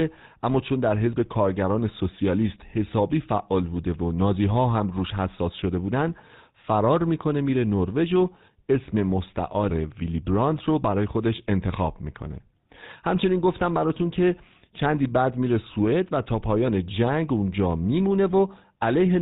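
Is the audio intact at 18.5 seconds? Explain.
No, GSM full-rate codec damage runs throughout, including 18.5 s: pulse-driven vocal-tract modelling gives buzzy, gravelly speech, and a spectrogram shows nothing above 4 kHz.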